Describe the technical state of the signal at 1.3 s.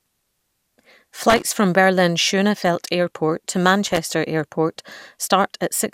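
At 1.3 s the speech is hit by loose connector crackle, running from 1.30 to 1.43 s. A worn or dirty contact is making and breaking in quick succession, so the signal is chopped on and off while any DC on the line adds pops at each transition. The result is a short, irregular burst of scratchy crackle. Unlike a clean digital dropout or a single click, the gaps and pops are uneven in spacing and intensity.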